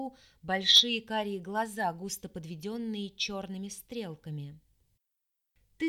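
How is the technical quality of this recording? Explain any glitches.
There is one glitch, a short burst of hard clipping from 0.71 to 0.80 s. For those 90 milliseconds or so, the signal ran about 4 dB past what a stage in the chain could pass, so its peaks were sliced flat. The squared-off tops add high harmonics, heard as a brief crackly rasp on the loudest moments.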